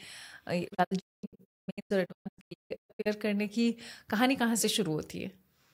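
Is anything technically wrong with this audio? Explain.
Yes: a digital broadcast dropout from 0.67 to 3.08 s. The receiver lost valid frames and muted, punching 20 ms faded silent holes (longest 224 ms) that show as blank vertical gaps in the speech.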